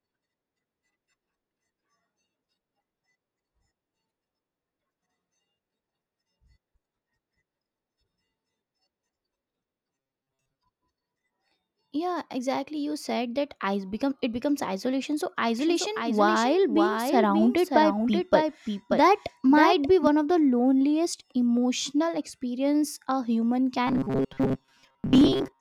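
From 9.96 to 10.59 s, robotic sound from repeated short buffers: audio likely arrived too seldom, so a roughly 7.5 ms slice was looped over about half the material, forcing a rigid metallic 134 Hz buzz onto the speech. From 15.59 to 20.07 s, a doubled audio track: the speech was likely captured twice, so a full-band copy about 5 dB quieter trails by about half a second, switching on and off abruptly. From 23.87 s to the end, the same repeated-buffer fault likely returns, with most of the audio replaced by loops and the 134 Hz buzz.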